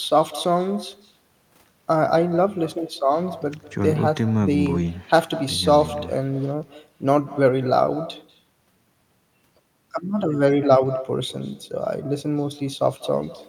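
From the first second to the last, the speech carries an echo with no canceller. The far end is clearly playing the call through a loudspeaker, its mic is catching that playback, and nothing strips it out, so the talker's own voice comes back after the network round trip, around a fifth of a second late. That copy sits about 17 dB below the direct speech and sounds thinner, trailing every phrase like a faint shadow.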